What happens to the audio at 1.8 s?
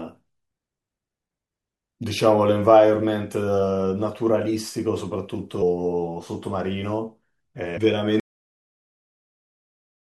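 Nothing goes wrong at 1.8 s: the speech runs through that moment intact, with no dropout, click or other fault.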